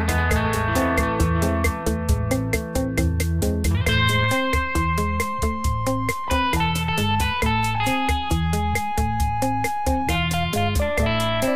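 A doubled audio track runs from the start until 4.24 s: a second full-band copy trails the original by roughly 0.7 s, a few dB quieter, with no decay or room colour, then stops abruptly. A second capture path or an out-of-step edit is the likely cause.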